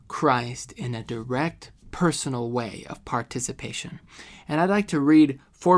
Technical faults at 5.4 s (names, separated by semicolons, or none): none